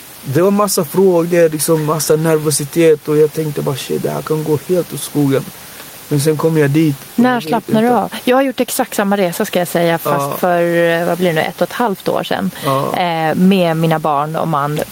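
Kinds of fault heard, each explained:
Gain pumping: gain swings roughly ten decibels, bringing loud and soft parts closer in level, likely excess gain hitting a fast limiter; flattened waveform.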